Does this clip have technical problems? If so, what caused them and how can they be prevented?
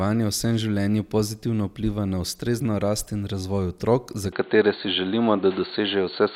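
Yes. After "in razvoj otrok za", at 4.33 s, the speech turns abruptly duller to the end with no gap, likely from the input switching to a poorer device. A spectrogram shows content cut off above 4.4 kHz, a level shift of roughly 5 dB, and a new noise floor about 30 dB down. To prevent it, lock the recording input to one device and turn off automatic switching.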